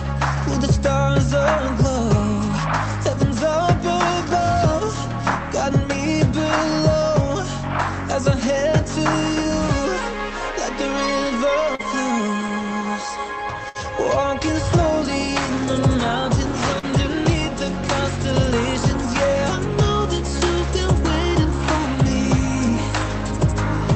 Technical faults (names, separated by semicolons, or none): short concealed packet loss; burst of packet loss